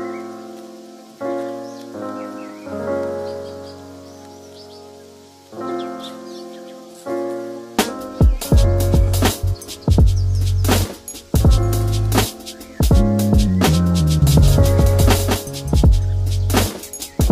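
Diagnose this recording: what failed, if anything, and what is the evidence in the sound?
From 14.22 s to 15.84 s a doubled audio track appears: a second full-band copy of the sound runs roughly 200 ms behind the original, only a few decibels quieter. The likely cause is the same signal being captured twice, once through a slower routing path, or an edit leaving two misaligned copies. Unlike an acoustic echo or reverb, the copy has no decay or room colouring, and it switches on and off abruptly.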